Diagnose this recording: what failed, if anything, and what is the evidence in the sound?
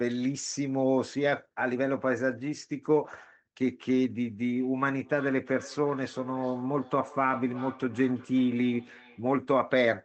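Call processing failed: a second device in the same room played the far end back into a live microphone, and that device's echo canceller could not remove sound it had not played itself. From 4.41 s to 9.29 s the speech returns at a steady interval of roughly 400 ms, peaking about 19 dB below the direct speech. That is feedback echo between two devices. The repeats sit inside the call codec's 8 kHz band, which fits Opus at around 20 kbps.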